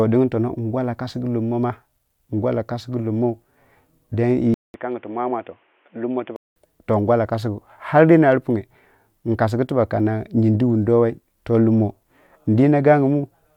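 Input switched to a poorer device, 4.54 to 6.56 s: after a 0.2 s gap, speech turns quieter and dull from "to ngwalla kasgu ar", cut off above 3.5 kHz, likely another microphone, before clearing again.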